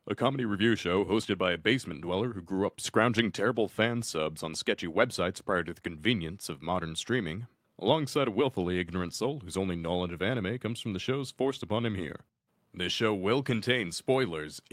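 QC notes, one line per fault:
3.19 s and 6.52 s, dropped samples: each time a single sharp click cuts through the speech, with no audible gap around it. The waveform jumps abruptly from one value to a later one, and that step is what produces the click. The likely cause is a handful of samples missing from the stream, only a tiny fraction of a millisecond each time. That is far too brief to remove any sound, so only the discontinuity is heard.
13.49–13.59 s, lost packet rebuilt from error correction: the speech keeps going without a break, but for about 60 ms within this span it turns rougher and noisier. The sound fits three lost packets, each replaced by the low-bitrate copy carried in the packet after it, as in Opus in-band forward error correction. The decoder plays those coarser copies, so nothing drops out but detail is lost.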